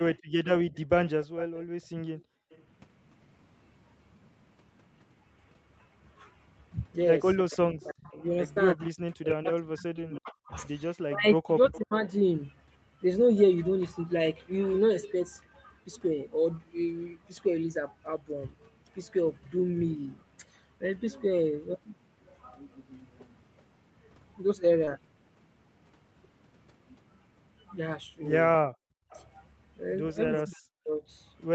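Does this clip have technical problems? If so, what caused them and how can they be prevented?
Yes. Echo leak appears from 0.0 to 2.63 s, 11.73 to 12.12 s, 29.10 to 29.27 s and 30.36 to 30.54 s. A faint delayed copy of the speech trails it by roughly 310 to 320 ms, at about 15 to 25 dB below the direct sound. The likely cause is a loudspeaker-side echo canceller that left part of its microphone pickup unremoved. Better speaker-to-mic isolation, or a headset, prevents it.

Background gated by the echo canceller occurs at 2.17 to 2.50 s and 28.69 to 29.10 s. The room sound drops by about 35 dB and then about 40 dB while the far-end loudspeaker plays, and it recovers when the canceller releases. A canceller tuned for gentler suppression, or a headset, avoids this.

Speech suppressed in double talk runs from 7.41 to 12.06 s and 30.44 to 31.02 s. The talker's level falls by around 40 dB in patches, totalling about three seconds and half a second. 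This is likely the canceller muting its own talker along with the loudspeaker echo when the two overlapped. Better double-talk detection, or less overlapping speech, prevents it.

Short concealed packet loss occurs at 8.53 to 8.58 s, 9.96 to 9.99 s and 24.85 to 24.90 s. In each case a 20 ms gap was bridged with 28, 12 and 13 ms of extrapolated signal, heard as a brief smear or wobble. A more stable network or a deeper jitter buffer reduces these.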